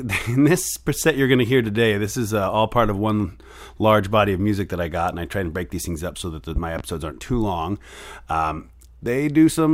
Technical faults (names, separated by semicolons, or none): loud pop